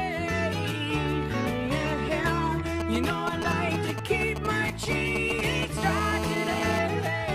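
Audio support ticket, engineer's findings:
GSM signalling bursts, 2.80–5.78 s: galloping ticks and short 217 Hz buzzes, roughly 5 dB below programme. Nearby 2G handset signalling; radio bursts rectified in audio input stage.

GSM phone buzz, 5.78–6.79 s: steady raspy 217 Hz buzz, rich in harmonics, about 4 dB below programme. Nearby 2G handset in call; continuous bursts rectified in audio circuitry.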